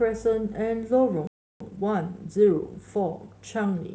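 At 1.27 s the speech cuts off mid-flow and the output drops to silence until 1.60 s, a gap of about 0.33 s. This is a playback stall, most likely the player running short of data or its output thread being held up, so nothing reached the output for that span. On a waveform it shows as a flat line with abrupt edges. On a spectrogram it is a clean vertical band of empty space across every frequency.

From 1.60 s to the end at 3.94 s, the speech picks up again but runs hurried, at about 1.1 times normal speed with the pitch unchanged. This is time-compressed catch-up: to work off the backlog left by the stall, the player removes short slices of audio and cross-fades across the joins. The result sounds rushed. On a spectrogram, harmonic lines keep their spacing while syllables sit closer together, with small smears or discontinuities at the splice points.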